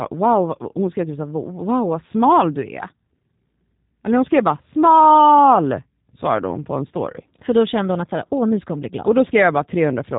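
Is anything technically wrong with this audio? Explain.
Yes. The whole recording carries G.729 codec damage, and it is plainly audible from start to finish. The speech has been rebuilt from a modelled vocal tract filter, a pitch predictor and a few pulses per short frame, rather than stored as a waveform. The sound fits a low-rate 8 kbit/s voice stream. Nothing reaches above 3.8 kHz, so the speech sounds narrow and muffled. It also has a rough, slightly synthetic edge.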